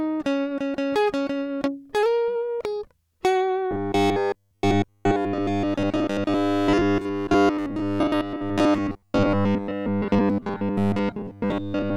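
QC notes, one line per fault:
3.71–11.96 s, robotic sound from repeated short buffers: from 3.71 s to the end, the music collapses into a rigid, metallic buzz pitched at 100 Hz, loosely tracking the original contour. This is likely from fresh audio arriving too slowly, so the player loops roughly 10 ms slices in place of most of the missing material. A spectrogram shows evenly spaced harmonics of 100 Hz replacing the music's own partials, and the waveform shows identical cycles repeating.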